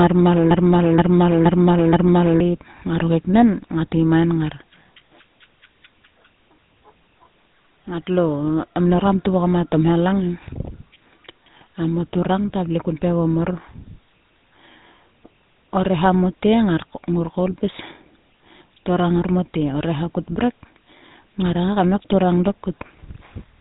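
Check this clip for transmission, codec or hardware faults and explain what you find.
Two faults are present: a GSM full-rate codec coloration across the whole clip and a broken-record loop near the start.

From 0.51 s to 2.40 s, a broken-record loop repeats a 473 ms fragment four times back to back before the speech resumes at "ngaro keknen ngat". The audio that belonged in that span is missing. The likely cause is a stalled player, encoder or stream resending its last buffered fragment.

Throughout the clip, the speech carries the GSM full-rate codec's buzzy, gravelly roughness. Nothing is present above 3.8 kHz, so the sound is dull and band-limited. The codec models the vocal tract and drives it with a sparse, regularly spaced pulse excitation, which fits a 13 kbps GSM full-rate link.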